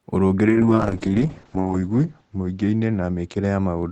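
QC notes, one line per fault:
0.49–3.91 s, call bitrate drop: 32 to 7 kbps and top end cut from 20 kHz to 8 kHz, giving watery coding roughness beyond a clean low-pass muffle.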